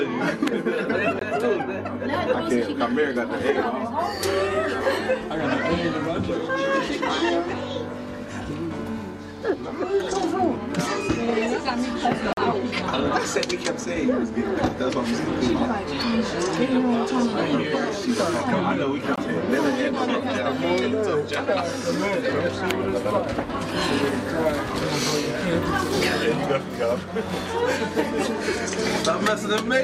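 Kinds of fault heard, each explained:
Bluetooth dropout: Three short holes where the sound goes silent and then picks up further along, as if it had kept playing. That's likely packets arriving too late for the wireless link: about 21 ms near 1.2 s and 19.2 s, and about 43 ms at 12.3 s.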